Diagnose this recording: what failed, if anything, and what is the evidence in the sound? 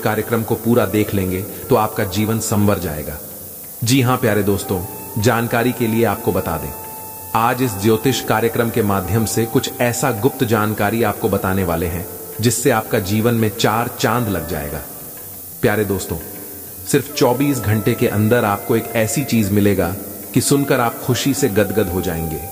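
The sample-format conversion requantized the audio to 6 bits with noise shaping, feeding the rounding error back so it moves upward in frequency. The result is a steady, thin hiss across the whole clip, only about 10 dB below the signal and rising sharply toward the top.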